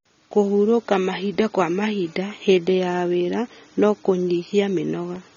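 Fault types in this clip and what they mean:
AAC compression: The speech has likely been through a low-bitrate AAC-LC encoder, which quantises each frame's frequency lines coarsely against a hearing model and spends too few bits on the upper spectrum. Nothing reaches above about 6.9 kHz, so the speech sounds dull and muffled, and the damage is plainly audible as smeared, warbling detail and fizzy sibilants throughout, a degree that fits a rate around 24 kbps.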